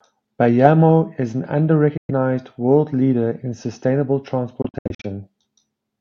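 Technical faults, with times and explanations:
1.97 to 2.11 s and 4.62 to 5.06 s, Bluetooth dropout. After "is an", the sound goes silent for about 0.12 s and then resumes as if it had played on. After "world leader in sustainable", about 0.23 s vanishes in gaps spread over 0.42 s, the longest 70 ms. Packets likely arrived too late and were dropped.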